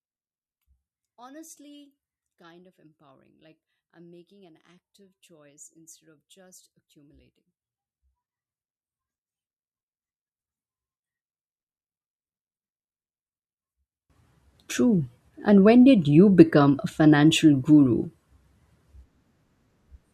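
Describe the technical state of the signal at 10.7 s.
At 10.7 s the speech is almost gone, down by about 36 dB. The fault is one channel inverted, running from 0.0 to 14.1 s. One channel's polarity is likely reversed. Summed to mono, the shared centre content cancels, leaving only a faint residue.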